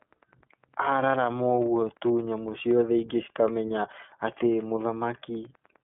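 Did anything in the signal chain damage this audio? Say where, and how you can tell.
Yes, the codec stage: iLBC throughout, nothing above 3.7 kHz, plus a rough synthetic grain from per-frame excitation coding that mere telephone-band filtering wouldn't add.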